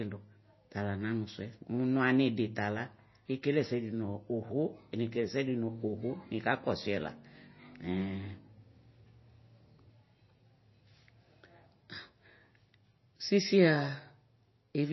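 From start to finish the speech sounds dull and watery, with a swirling, metallic edge on s sounds and consonant onsets that blur instead of landing crisply. Nothing comes through above about 5.8 kHz. This is likely MP3 compression at a low bitrate, with damage that fits roughly 24 kbps: short of bits, the encoder has cut the treble at a fixed point and dropped weak frequency lines, which flicker in and out from frame to frame.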